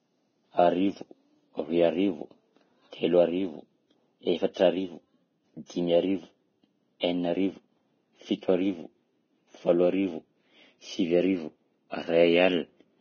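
Heavy Vorbis compression runs through the whole speech clip. Nothing is heard above 6.5 kHz, and the remaining treble has been quantised so coarsely that its fine structure has turned into hiss of similar energy. Consonants sound grainy, vowels rough, and onsets blurred. The likely cause is a Vorbis encode at a very low quality setting, which fits a bitrate of around 18 kbps.

Pre-echo appears from 7.00 to 7.03 s, where a sharp onset is preceded by about 30 ms of hiss. The codec spreads its quantisation noise across an entire transform block, and here the attack sits late in its block. Noise sized for the loud attack therefore leaks into the quiet stretch just before it, so the attack arrives softened and smeared rather than crisp.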